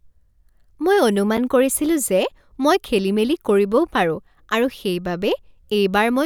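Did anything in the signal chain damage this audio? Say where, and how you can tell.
Yes. Speech playback shows a gap between chunks, at the storage or playback stage where audio is handled in fixed blocks. There are two short holes with hard edges, at 1.37 s (just before "কৰিছিলো যে মই খেলিমেলি") and at 3.88 s. Each is about 6.5 ms of silence, and they are spaced 2.5 s apart, which matches a 2.5 s chunk length. No audio is missing. The stream simply stops briefly at each join before the next chunk starts.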